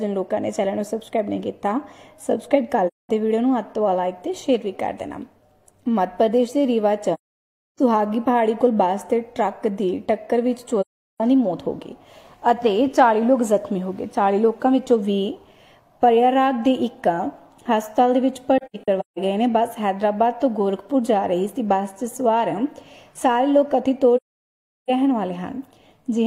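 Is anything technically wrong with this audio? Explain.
Yes. AAC frame loss with muting occurs at 2.87, 7.13, 10.81, 18.58 and 24.16 s, with holes of 0.21, 0.64, 0.38 and 0.73 s. At 18.58 s, 0.34 s is lost in pieces across 0.6 s, the longest gap about 0.15 s. The decoder zeroes missing frames, so overlapping windows fade the sound out and back in. The spectrogram shows blank vertical bands and the waveform shows tapered flat gaps.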